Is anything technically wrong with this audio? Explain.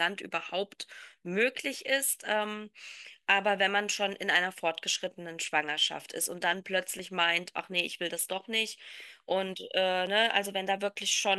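Yes. Dropped buffer (overrun) at 2.95 s, 6.99 s and 10.07 s: the speech jumps abruptly at each point, likely because the recording software fell behind and the hardware overwrote samples before they were collected. The missing stretch, roughly 10 ms at the first and about 15 ms at the other two, is gone, and the audio on either side is butted together with no gap, so each join is heard as a small skip forward in the speech.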